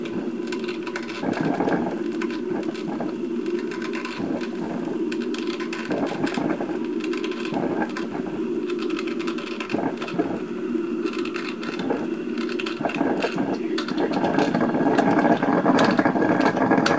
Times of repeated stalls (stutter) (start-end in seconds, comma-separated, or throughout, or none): none